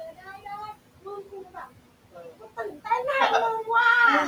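Noise suppressor artifacts run through the whole recording. The suppressor treats the room noise, which sits about 19 dB below the speech, as steady noise and turns it down by about 18 dB frame by frame, so the background sinks in pauses and rises again under the talking.

Speech cut by the noise suppressor occurs at 0.17–0.46 s, 1.25–1.57 s and 2.15–2.86 s. In these stretches the suppressor mistakes quieter parts of the speech for noise and lowers them by about 11 to 12 dB. Roughly a tenth, a sixth and a third of a second are affected, and they sound swallowed or faint.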